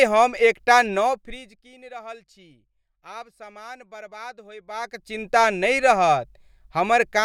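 A speech clip where, right after "हम एक टा", from 0.94 to 1.69 s, the level drops by around 20 dB in 1 dB steps about fifty times a second, so you hear zipper noise ticking under the voice until "रहल छी".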